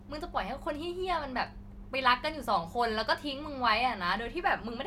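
No technical faults are audible.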